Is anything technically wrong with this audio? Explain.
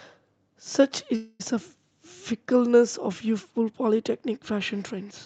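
Yes. At 1.15–1.42 s there is a call audio freeze: a fading buzz, likely from a starved jitter buffer, appears as a smeared, decaying band before the sound resumes intact but later.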